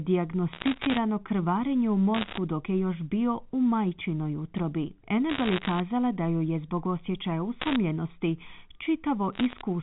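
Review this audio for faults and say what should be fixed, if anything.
Bit errors on the digital phone line produce bursts of sharp ticks and crackle at 0.53–0.98 s, 2.14–2.38 s, 5.30–5.80 s, 7.60–7.76 s and 9.33–9.61 s. Roughly one half to one and a half bits in a hundred flip, and each flip corrupts a single G.711 sample. Prevent this by repairing the noisy line or adding error protection on the link.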